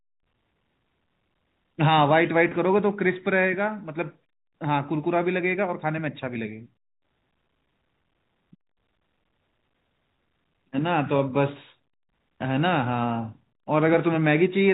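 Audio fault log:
2.49–2.51 s, 6.34 s and 10.17 s: packet loss with pitch repetition. The first is a 20 ms dropout and the other two are 10 ms each. The receiver repeated the last pitch period to fill each gap, which you hear as a tiny held buzz.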